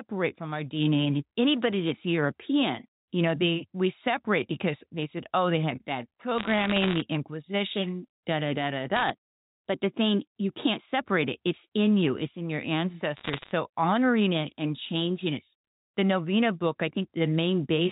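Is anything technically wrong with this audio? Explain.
Yes. Bit errors on a digital phone line show up three times: 6.38 to 7.02 s right after "oh they had bad", 8.96 to 9.10 s after "da da da da", and 13.17 to 13.52 s after "in your", ending before "honoring it and changing". Flipped bits corrupt individual samples, and the sign or high-order hits give sharp ticks. It sounds like a burst of crackle over the speech, fitting error rates of roughly 0.7 to 1 percent. The line itself is G.711-style telephone audio, capped at 4 kHz.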